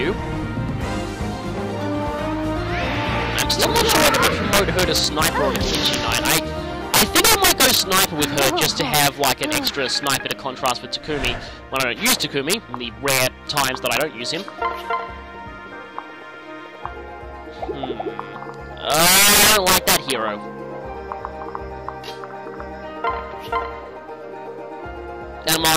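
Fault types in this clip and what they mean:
Integer overflow: the level ran past the top of the integer range and wrapped round to the opposite sign instead of being limited, so every over-range peak flips right across the scale. You get harsh cracks, much nastier than clipping, with overdrive up to about 10 dB from 3.39 s onward.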